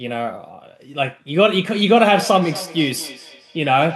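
From 1.72 s to the end, the speech gains a trailing repeat: each sound returns about a fifth of a second later, thinner and with a ringing edge, peaking at about 16 dB below the direct speech. This is feedback echo between two devices. A second device in the same room plays back what this microphone sent, and the microphone picks it up again. The echo canceller only removes its own device's playback, so this copy passes through.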